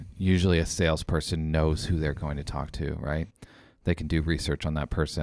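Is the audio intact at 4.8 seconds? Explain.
Yes, at 4.8 s the speech plays through cleanly, with no dropout, click, distortion or other audible fault at that moment.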